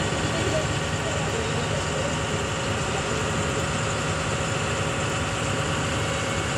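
Throughout, a resampler restarted on every block leaves a small error at each 100 ms edge, heard as regular ticks at 10 Hz, consistent with 24 kHz to 48 kHz conversion.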